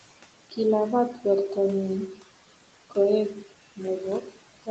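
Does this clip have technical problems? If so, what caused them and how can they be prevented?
Yes. Noise suppressor artifacts run through the whole clip. The suppressor estimates the steady room noise and pulls those bands down frame by frame, by about 17 dB here. The background therefore drops away in the gaps and comes back under the speech. The room noise itself sits about 16 dB below the speech. Using a quieter room or a closer microphone would let the suppressor work more gently.

Speech cut by the noise suppressor occurs at 1.14 to 1.25 s and again at 4.21 to 4.37 s. In each case the suppressor mistook low-level speech energy for noise and turned it down with the background, by about 9 dB in the first spot and about 14 dB in the second. That leaves roughly a tenth of a second, then about 150 ms, of sound that seems swallowed or faded. A less aggressive suppression setting, or a stronger speech signal relative to the noise, would keep these quiet parts intact.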